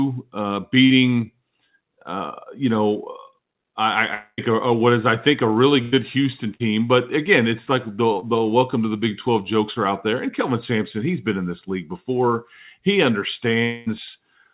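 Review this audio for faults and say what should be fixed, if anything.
Short concealed packet loss shows up at 0.86–0.92 s, 8.20–8.24 s and 9.74–9.78 s. Each is a 20–40 ms hole the receiver papered over by extending the last bit of speech, so you hear a quick smear or wobble rather than a gap. A slightly deeper jitter buffer or forward error correction would let those late packets get used instead of guessed at.

Burst of packet loss hits at 5.82–5.94 s, losing about 100 ms, and again at 6.54–6.62 s, losing about 60 ms. Several packets in a row went missing, so the concealment stretches the last sound into a held buzz or fading hiss before speech picks up again further on. Redundant encoding or FEC tuned for bursty loss on that link would cover runs like these.

The bigger holes at 4.14–4.40 s and 13.64–13.88 s are likely a long network dropout. Around 220–240 ms of audio just never arrived. 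At 4.14 s the filled-in sound fades out and leaves about 20 ms of silence before things resume. At 13.64 s it covers the whole gap without going quiet. Either way, that stretch of speech is gone. The real fix is upstream: a steadier network path, or a way to detect the stall and retransmit before playout.

All of this rides on a narrowband call path with nothing above 4 kHz, which fits a 64 kbps G.711 mu-law link.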